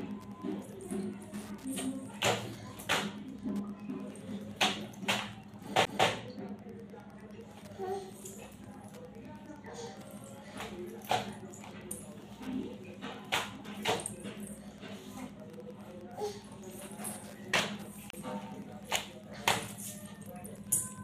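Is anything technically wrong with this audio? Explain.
Yes. A nearby Wi-Fi radio's beacon is being picked up and rectified by the audio circuit, producing Wi-Fi interference: steady ticking every 102.4 ms, roughly ten per second, well below the sound throughout.

At 5.85 s and again from 18.10 to 18.13 s, a CD skip occurs. The laser jumps to another turn of the disc spiral, so playback briefly mutes with a tick, then resumes from a different point.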